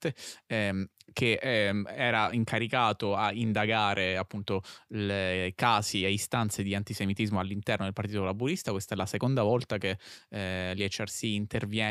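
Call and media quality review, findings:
Nothing stood out on listening to the speech in this recording, so no findings are raised for it.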